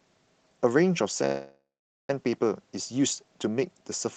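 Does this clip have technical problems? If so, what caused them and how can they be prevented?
Yes, there's a call audio freeze from 1.25 to 2.10 s. The last sound gets stretched into a fading buzz or hiss, then drops to about 0.45 s of silence, and the speech picks up exactly where it left off, with nothing lost. That's likely packets stalling on the way and the jitter buffer running dry. To prevent it, use a steadier network connection or let the jitter buffer hold a little more delay.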